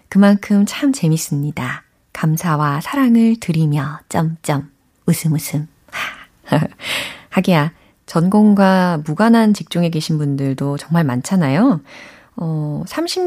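No audible technical faults.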